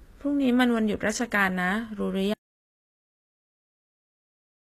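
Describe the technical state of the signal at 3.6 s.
An audio dropout to silence covers 3.6 s, running from 2.34 s to the end of the clip. The input was likely lost while the recorder kept writing silence, so the gap is silent with no room tone, and the speech stops mid-flow.

HE-AAC compression applies across the whole clip, including this moment. The treble is rebuilt from lower bands, nothing exists above 14.9 kHz, and the damage is plainly audible, which fits a bitrate around 24 kbps. At 3.6 s, though, there is only silence for it to act on.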